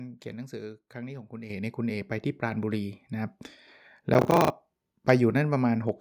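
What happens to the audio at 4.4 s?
The processor falls behind and misses its buffer deadlines again and again from 4.14 to 4.5 s, around fifteen times, each time replaying a short stretch of old audio, roughly 10 ms long. These hard-edged repeats pile up into processor overload crackle, a gritty tearing riding over the speech.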